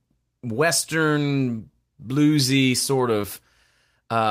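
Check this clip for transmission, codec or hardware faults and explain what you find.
One fault. At 3.21 to 3.25 s a brief smear or wobble appears: short concealed packet loss, where about 20 ms never arrived and the receiver extended the preceding sound before blending back.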